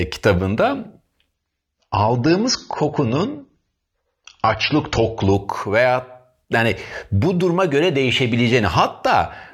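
From 1.34 s to 5.34 s, starting just before "veya yani bu duruma", the speech abruptly loses its top end, with nothing above about 7.2 kHz, and takes on a thin, swirly edge, then snaps back to full clarity. This is an adaptive stream at a lower bitrate. When the connection slowed, the player switched to a leaner encode without any gap. The narrowed band and heavier artefacts fit a drop from around 96 to around 24 kbit/s AAC.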